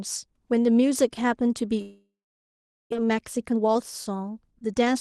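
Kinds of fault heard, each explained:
Long network dropout: At 1.81 s the audio stops arriving. What's left is smeared into a fading buzz, and then there's near silence for about 0.77 s until it picks back up at 2.94 s, roughly 1.1 s of gap in all. When it returns, about 0.6 s of the original has been skipped, so the speech jumps ahead. That's most likely a run of lost or late packets, and it leaves the stream sitting about half a second further behind.
Jitter buffer speed-up: Right after the gap, from 3.02 to 4.96 s, the speech runs about 15% fast but keeps its pitch, so it comes across a bit rushed. Audio piled up in the buffer after the dropout, and the receiver kept trimming tiny pitch-period-sized slices, roughly 0.3 s in total, to pull the delay back down. All of this sits on top of Opus coding, with the highs rolling off near 12 kHz.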